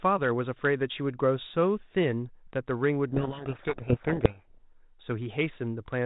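From 3.08 to 4.57 s, a codec payload misread reverses the bit order of the G.726 code words, burying the speech in harsh distortion that starts and stops abruptly, unlike the light coding noise of the 32 kbit/s G.726 path.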